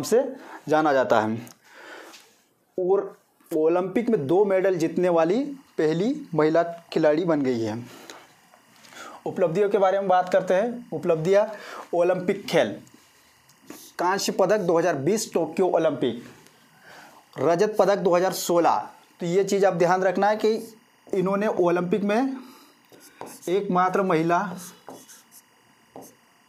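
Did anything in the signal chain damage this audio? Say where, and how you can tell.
Yes, timecode bleed in the analogue wiring. From 3.99 s to the end, a faint chirping warble near 1 and 2 kHz sits about 40 dB down. It fits 24 fps linear timecode leaking from a neighbouring cable.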